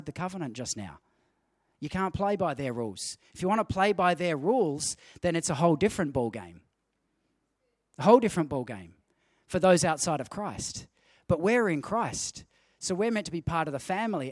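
No technical faults are audible anywhere in the speech recording.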